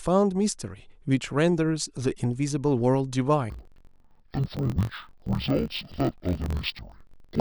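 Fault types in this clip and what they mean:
Interleaved audio read as planar: from 3.50 s to the end, each block of roughly 21.77 ms is split wrongly, with its first half sent to the left channel and its second half to the right. Each half plays at half speed, so the speech drops an octave and sounds doubled and choppy. Unlike a sample-rate mismatch, the pace of the speech stays normal.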